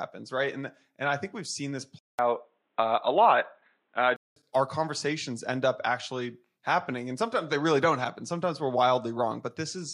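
At 1.99 s the speech drops out for about 200 ms. It then returns dull and boxy, with nothing above 4.1 kHz. The level shifts by about 5 dB, and a faint new background noise appears well under the speech. At 4.36 s the full band comes back. This is likely an input switched to a poorer device, such as another microphone or a headset's call profile. That device passes a narrower band and has its own tone, level and noise.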